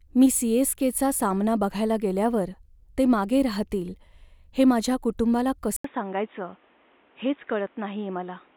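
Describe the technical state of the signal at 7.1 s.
At 7.1 s the speech is band-limited, with nothing above 3.8 kHz, which leaves it dull and boxy. This state begins at 5.76 s, just after "हे माझ्या कुटुंबाला", following an 80 ms silence, and runs to the end of the clip. The level drops by roughly 5 dB and a new noise floor appears about 35 dB down. The likely cause is an input switched to a poorer device, whose narrower passband, lower gain and own background noise replaced the original path.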